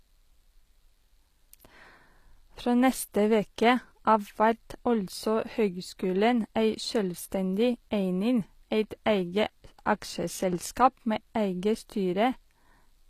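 Throughout, sibilants sound gritty and metallic, with nothing above 14.9 kHz, likely from HE-AAC compression at about 24 kbps, whose replicated treble misaligns harmonics.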